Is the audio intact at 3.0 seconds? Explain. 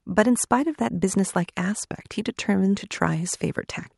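Yes, the speech plays through 3.0 seconds without any audible fault.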